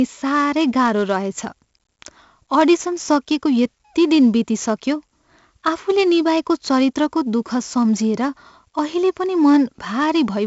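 Throughout the speech, 4-bit ADPCM compression adds a gritty hiss that tracks loud syllables and smears sharp attacks, with nothing above 7.7 kHz, which fits a 64 kbps stream.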